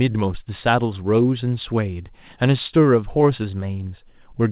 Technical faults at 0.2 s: none

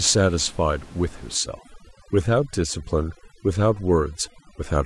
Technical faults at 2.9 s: overdone noise removal

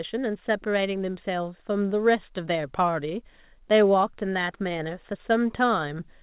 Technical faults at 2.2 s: none

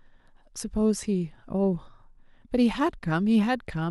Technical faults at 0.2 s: none

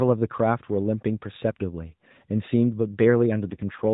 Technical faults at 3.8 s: AMR rate drop

